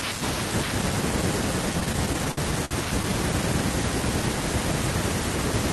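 From 1.73 to 3.06 s the speech shows repeated stalls (stutter): packets arrived late, draining the jitter buffer eleven times. Each gap, the longest 56 ms, was bridged by extending the preceding sound, about 201 ms in total, so nothing drops out but delivery drags and stutters.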